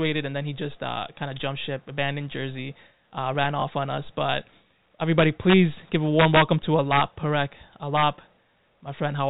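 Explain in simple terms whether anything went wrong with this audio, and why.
Yes, two things went wrong. The first is integer overflow. Loud moments in this speech pushed past the largest number the system could hold. Instead of stopping at the limit, the values wrapped to the opposite extreme. That causes harsh cracks, much sharper than ordinary distortion, at 3.44 s, 5.19 to 5.54 s, 6.20 to 6.42 s, 6.92 to 7.01 s and 7.97 to 8.03 s.

The second is packet loss with the last packet repeated. One 20 ms piece of audio went missing at 3.60 to 3.62 s. The receiver filled the gap by replaying the piece before it, so you hear a small blip. All of this comes through the narrow G.711 telephone sound, which passes nothing above 4 kHz.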